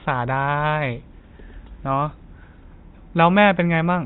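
A short speech recording with nothing technically wrong with it.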